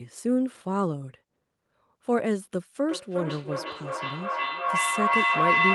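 A microphone-to-loudspeaker loop gains level each pass from 2.89 s, building a feedback howl near 1 kHz with the loop repeating about every 0.4 s, peaking about 4 dB above speech.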